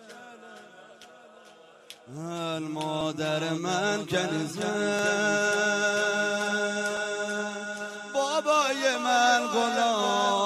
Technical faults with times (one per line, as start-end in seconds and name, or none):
3.01 audio missing between chunks
4.99 audio missing between chunks
6.97 audio missing between chunks
8.95 audio missing between chunks